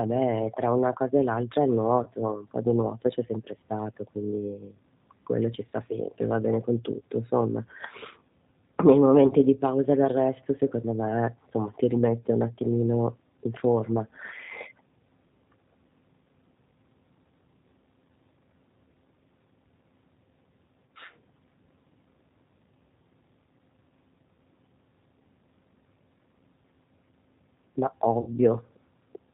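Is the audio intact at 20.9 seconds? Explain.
No. VoIP packet loss concealed by the speech codec affects 20.86 to 20.90 s. About 30 ms of audio went missing, which fits a single lost packet. The decoder filled the gap by extending its last pitch and vocal tract filter at falling gain, so the sound smears into a brief buzzy tone or coloured noise that fades. Because each frame builds on the previous one, the speech sounds weak or distorted just after the gap.

G.729 codec damage is also present at this moment. The 8 kbit/s G.729A coder rebuilds the speech from a filter, a pitch predictor and a few pulses per frame. It removes everything above 4 kHz and leaves a plainly rough, synthetic texture.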